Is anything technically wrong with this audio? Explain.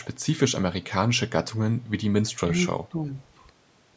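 Yes. The speech has two kinds of call-processing fault.

Echo leak, from 2.29 to 2.38 s: a faint, delayed copy of the speech appears, lagging the original by about 327 ms and sitting very low, roughly 35 dB under the direct signal. This likely comes from a far end playing the call over a loudspeaker, where the echo canceller failed to fully subtract what its microphone picked up and returned the residue. It is heard as a brief ghost of earlier sound.

Speech suppressed in double talk, from 2.39 to 2.53 s and from 2.89 to 3.17 s: the speech level dips sharply, by around 15 dB at the deepest, across roughly a tenth of a second in the first stretch and about a third of a second in the second. The likely cause is an echo canceller that could not separate the local talker from loudspeaker echo during simultaneous speech and attenuated everything. The result is audible gating, with the speech pulled down in chunks. 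The band-limiting to 8 kHz from the call microphone processing is expected.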